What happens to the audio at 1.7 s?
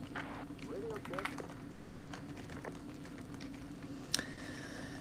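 From 1.71 to 2.09 s the sound decays into a fading buzz, then resumes with that stretch gone. Likely a long network dropout, with the receiver extending the last sound.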